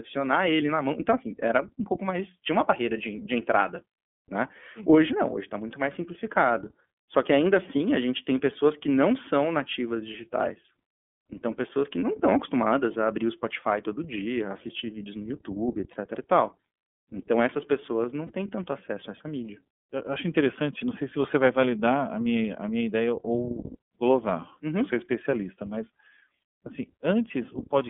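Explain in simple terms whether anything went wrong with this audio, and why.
Throughout the recording the speech sounds thin and boxed-in, like a phone call, with a slightly rough, synthetic edge. That comes from the iLBC codec, a voice-over-internet codec that squeezes the sound into small chunks and keeps only a narrow telephone band, from about 200 Hz up to about 3.4 kHz. The brightness and airiness above that are simply gone, and the heavy compression adds the audible roughness.

Twice the voice briefly smears into a short, slightly buzzy held sound: at 15.93 to 15.97 s, just before "e tal", and at 18.26 to 18.31 s, between "essas pessoas não" and "têm tanto acesso a". These are lost iLBC frames. A piece of the signal went missing in transit, and the decoder filled the gap by repeating the last bit of voice with some noise. Each gap lasts about 30 ms, which fits one dropped chunk. The voice recovers immediately afterwards.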